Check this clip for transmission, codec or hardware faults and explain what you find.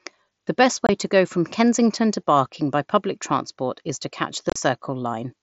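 One transmission fault, in two places: unconcealed Bluetooth headset packet loss at 0.87 to 0.89 s and 4.50 to 4.56 s. Short voice packets never arrived and were replaced by silence or an idle pattern, leaving holes with abrupt edges. The later one is scattered into a brief chop, its longest gap about 30 ms. Across the clip the speech carries the light graininess of the mSBC headset codec.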